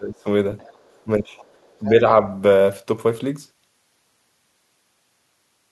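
Speech recorded on a call, with two kinds of echo-canceller trouble early on. First, speech suppressed in double talk. From 0.0 to 0.27 s the talker's level sinks, by roughly 20 dB at its deepest. A shorter, shallower dip of a few decibels follows from 1.8 to 2.02 s. Both sides were likely talking at once. The canceller could not tell the talker from the loudspeaker echo, so it pulled everything down. Second, the other side's voice leaking through. A faint second voice sits under the speech from 0.58 to 1.0 s and again from 1.24 to 1.9 s. It is quiet, around 30 dB below the talker. The likely cause is far-end audio from the loudspeaker reaching the microphone. The canceller did not fully remove it. The second leak overlaps the second dip, which fits both sides being active together.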